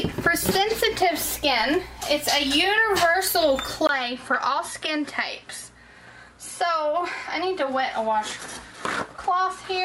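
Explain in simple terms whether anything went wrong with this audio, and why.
At 3.87 s the sound drops out for about 20 ms, then returns duller and slightly quieter, with a faint new background hiss and nothing above 11.4 kHz until the end. That points to an input switched to a poorer device, likely a lower-quality microphone.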